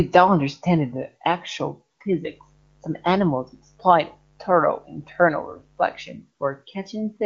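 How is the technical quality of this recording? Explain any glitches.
A mains buzz intrudes on the speech from 2.27 s to 6.12 s. Interference from the 50 Hz supply is leaking into the signal path, probably through a dimmer, rectifier or poorly shielded cable. These switching spikes arrive twice per mains cycle, so the buzz is built on 50 Hz and carries a dense ladder of harmonics into the kilohertz range. It sounds like a steady, raspy hum sitting faintly under the talker, roughly 35 dB below the speech. The HD Voice (AMR-WB) coding adds no audible roughness, which fits its highest rate.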